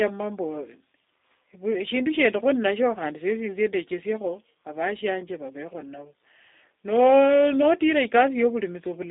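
The whole clip carries G.729 codec damage, plainly audible: speech squeezed into roughly 300 Hz to 3.7 kHz, rebuilt from a few pulses per frame, so it sounds thin, rough and slightly synthetic.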